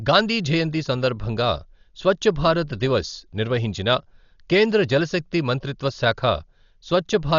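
Throughout the speech, nothing is heard above 7 kHz, and rough, fluttering noise clings to the voiced tones. This is likely Dolby Digital compression, heavily damaged at a very low bitrate, perhaps near 40 kbps. Unlike a clean low-pass, the bands left without bits are filled with dither noise rather than silence.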